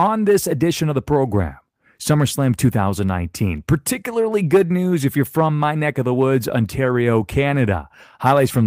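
A short speech recording, with nothing technically wrong to be heard anywhere in it. No fault turns up at any point, so there are no times or causes to give.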